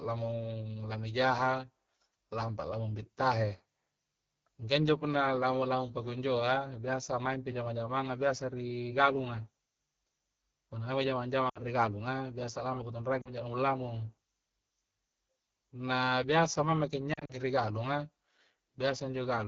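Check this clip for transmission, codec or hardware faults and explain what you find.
Two faults can be heard: codec damage across the whole speech recording, and three short dropouts from lost frames.

AMR wideband (HD Voice) codec, throughout: the decoder rebuilds speech from a pulse-excited vocal tract model and fills the top band above 6.4 kHz with shaped noise. The plainly rough, raspy texture points to one of the lowest modes, around 8.85 kbit/s.

Lost AMR speech frames, at 11.49 to 11.61 s, 13.21 to 13.29 s and 17.13 to 17.33 s: when frames are missing, the decoder repeats the last good pitch and vocal tract settings at falling gain. This gives 60 ms of sound fading to near silence before "ri gallunga biasa lamu", a 40 ms fade to near silence before "jarung lamung", and 100 ms of gaps scattered across 160 ms before "ri galunga", none longer than 40 ms.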